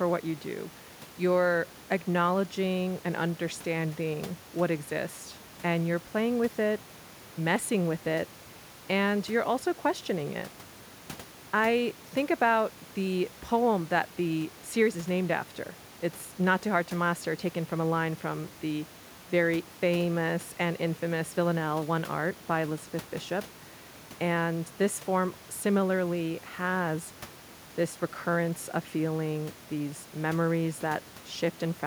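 A speech recording with nothing technically wrong with it.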